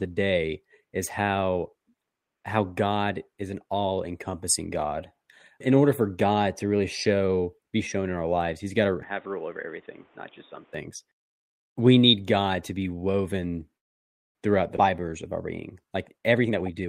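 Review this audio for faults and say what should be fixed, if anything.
From 9.03 to 10.74 s, just after "got to", the sound turns dull and boxy with no gap at the switch. Nothing reaches above 3.8 kHz, the level falls by about 5 dB, and a new background noise sits roughly 30 dB under the signal. This is an input switched to a poorer device, likely a change to another microphone or a headset's call profile, whose narrower band and different noise floor set the sound for that stretch. Lock the capture device for the session and disable automatic switching to headset call profiles.

Between "to be woven" and "throughout the", from 13.77 to 14.37 s, the audio stops for 0.58 s, almost all of it silent, then resumes exactly where it left off. This is a call audio freeze. Packets were likely held up in transit, the jitter buffer ran dry, and the receiver filled the wait with silence. No speech is lost, but the playout delay grows by 0.58 s. 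Improve network path stability or allow a somewhat deeper jitter buffer so short delivery stalls are absorbed.

At 14.77 to 14.80 s, between "be woven throughout the" and "of our", playback jumps forward with only a few milliseconds of fill. About a fifth of a second of audio is missing, and the two sides are joined almost directly. This is a skip ahead: a stretch of audio was dropped, either in transit or by an overflowing jitter buffer, while later audio was already waiting, and the delay fell by roughly 150 ms after the freeze. Tune the buffer's delay recovery to use gradual time compression rather than dropping whole stretches.

From 16.11 s to the end of the clip, the speech runs at 137% speed while the pitch stays the same, so it sounds hurried. This is a jitter buffer speed-up. The buffer held more audio than its target, so the receiver removed short pitch-period pieces many times in a row, around 300 ms in total, to bring latency down quickly. 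Limit the compression rate so excess buffered audio is drained more slowly and less audibly.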